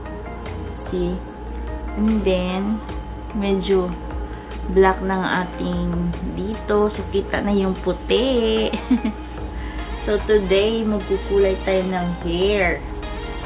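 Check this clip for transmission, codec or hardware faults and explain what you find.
No transmission, codec or hardware faults are audible anywhere in the recording.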